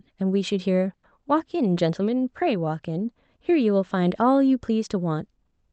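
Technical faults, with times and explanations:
0.93 to 1.05 s, burst of packet loss: About 100 ms of audio never arrived in time. The receiver stretched the last sound to cover the gap, fading it as it went. The speech then jumps ahead, with about 100 ms missing.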